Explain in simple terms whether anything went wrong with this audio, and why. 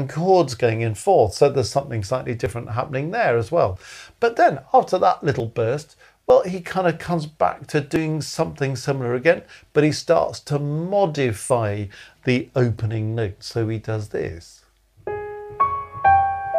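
Six times the audio lurches forward slightly, at 2.46, 3.76, 5.4, 6.3, 7.96 and 11.5 seconds. There's no gap of silence; a small slice simply vanishes and the sound on either side is stitched together. Most jumps are tiny, a few hundredths of a second, and the one near 7.96 is the biggest. This is likely a dropped buffer (overrun): the recording software fell behind and the hardware overwrote audio before it was saved.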